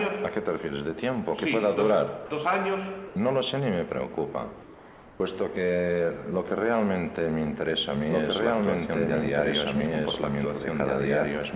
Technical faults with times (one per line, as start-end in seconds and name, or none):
2.26-2.30 sound dropped by the voice detector
3.08-3.16 comfort noise in place of the background
8.10-11.55 doubled audio track